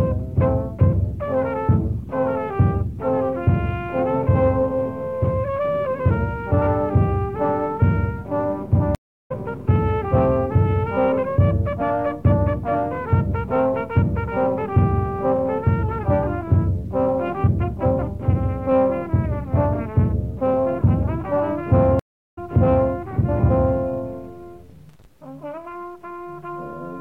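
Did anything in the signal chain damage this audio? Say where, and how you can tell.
Yes. The sound cuts to silence for 0.35 s at 8.95 s and 0.37 s at 21.99 s, then resumes a few tenths of a second further on, skipping material. This is a stream reconnect: the network connection dropped and the player restarted decoding mid-stream.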